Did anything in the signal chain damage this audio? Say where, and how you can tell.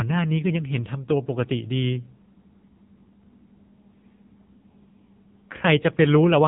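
Yes. From start to finish the speech sounds buzzy, thin and synthetic, with a boxed-in, telephone-like tone and nothing above about 3.8 kHz. That points to the codec stage: an AMR narrowband mobile codec (AMR-NB) at a low bitrate, consistent with around 6.7 kbps. At 8 kHz sampling, the 4 kHz ceiling removes all the upper bands. With so few bits, the vocal-tract model is driven by too few pulses per 5 ms subframe, so the voice is rebuilt with heavy, mechanical-sounding damage.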